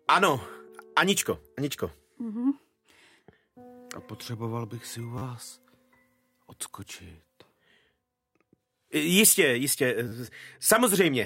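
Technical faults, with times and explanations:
5.18 to 5.22 s and 10.08 to 10.12 s, repeated buffer: the same tiny slice plays four extra times, which fits a 10 ms buffer, so each spot has a hard-joined 40 ms stutter that comes across as a brief buzz. Nothing seems to go missing afterwards.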